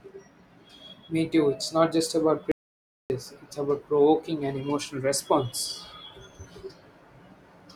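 Speech clip with one audio dropout to silence: right after "it's not just about", the sound cuts to dead silence from 2.52 to 3.10 s, about 0.58 s lost, likely a dropped input link.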